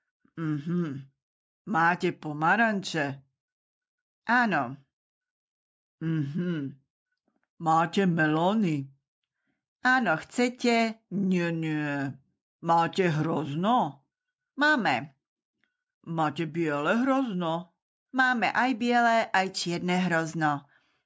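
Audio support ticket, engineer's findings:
No technical faults found; the signal shows nothing in capture, processing or playback that needs logging.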